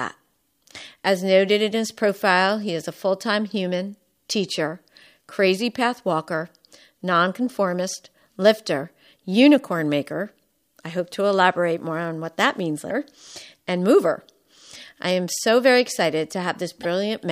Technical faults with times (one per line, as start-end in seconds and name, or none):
1.15 damaged data in a compressed stream
12.87-12.91 damaged data in a compressed stream
16.83-16.85 damaged data in a compressed stream